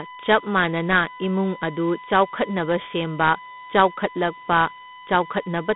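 From the first moment to the end, a steady USB whine sits under the speech, a fixed-pitch tone built on 1 kHz with a stack of harmonics, loudest around 5 kHz and only roughly 10 dB below the speech. It's the bus's 1 ms frame timing leaking into the analogue side through shared power or ground.

Running just as long, the speech has been through Dialogic VOX ADPCM. It's squeezed into a phone band of 150 Hz to 3.6 kHz, with nothing above 3.8 kHz, and a plainly audible gritty hiss rides along with it. That fits coarse 4-bit ADPCM at 8,000 samples a second, around 32 kbps.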